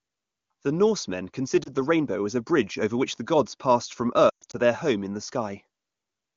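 Lost AMR speech frames: at 1.63 s, just before "the rainbow as a", a single frame failed its checks and the decoder filled the gap by reusing its last good settings, giving a brief dip. From 4.29 to 4.56 s, between "the gods passed from" and "their home in the", losses scattered over 240 ms, with a longest run of 120 ms, drop the sound to near silence within two frames before the speech returns weakly.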